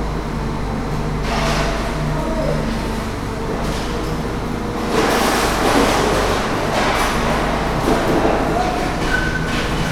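No technical faults can be heard anywhere in these everyday sounds; the signal stays steady and intact throughout.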